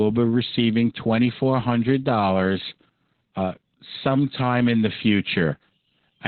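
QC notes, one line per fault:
Throughout: Opus voice compression, and a heavy dose of it. Nothing gets through above about 4.2 kHz, so the speech sounds boxed-in and muffled, like an old phone line. That's the codec's SILK coder squeezed down to narrowband, with its excitation coded so coarsely that the voice turns hoarse and a bit robotic. The damage points to a very low bitrate, somewhere around 8 kbps.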